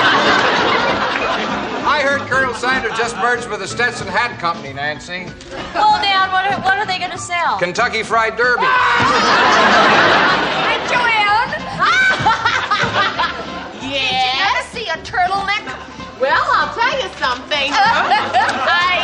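MP3 compression damage runs through the whole clip and is plainly audible. The likely cause is an MP3 encode starved of bits, consistent with a rate near 64 kbps. With so little budget, the encoder discards the top of the spectrum above a fixed cut-off and drops quieter frequency lines, which flicker in and out between frames. The result is a dull, watery, swirling texture, with sharp onsets smeared rather than crisp.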